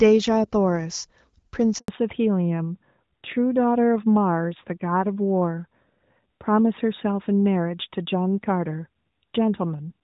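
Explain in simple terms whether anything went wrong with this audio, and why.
A handover gap cuts the speech from 1.78 to 1.88 s. For about a tenth of a second the phone was switching the call from one network to another, and no speech came through during the changeover. The voice fades out almost at once and stays silent until the new connection picks up, so whatever was said in that moment is simply gone.

Right after that, at 1.88 s, the call falls back to narrowband and stays that way until the end. Before the switch the call was carried in HD Voice, which keeps the crisp upper range of the voice. After the switch it moved to an older, lower-quality phone codec that throws away everything above 4 kHz. That is why the voice sounds duller, flatter and rougher from this point on.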